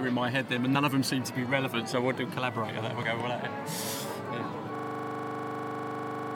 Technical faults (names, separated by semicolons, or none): system hang loop